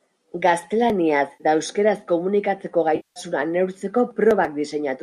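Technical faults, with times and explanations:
1.33 to 1.44 s and 2.96 to 3.20 s, AAC frame loss with concealment: about 70 ms, then 200 ms of frames went missing, and the decoder filled each gap from the last good spectrum, leaving smeared, noisy patches.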